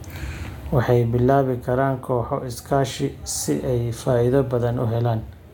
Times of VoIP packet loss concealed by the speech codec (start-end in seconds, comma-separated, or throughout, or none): none